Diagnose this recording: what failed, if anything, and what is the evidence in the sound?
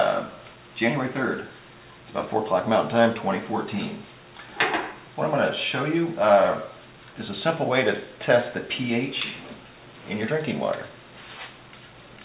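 Nothing in this recording points to a failure at any stage. It has passed through a working call path, and the absence of any content above 4 kHz fits narrowband G.711 A-law coding at 64 kbps.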